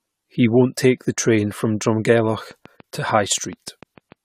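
Throughout, the speech sounds swirly and hollow, with blurred attacks and nothing above 18.6 kHz, likely generation loss from several passes through an AAC-type codec around 96 kbit/s. From 2.51 to 4.13 s, a train of clicks ticks at a steady 6.8 per second, about ten pulses roughly as loud as the speech, probably from interference or a faulty connection.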